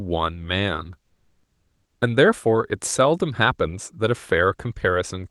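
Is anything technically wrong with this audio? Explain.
Yes. From 1.03 to 2.01 s, comfort noise replaces the background. The sender likely stopped transmitting during the pause (Opus DTX), so the receiver filled the gap with synthetic noise. The real background, about 53 dB below the loudest sound, becomes a steady, featureless hiss that shifts level by about 4 dB.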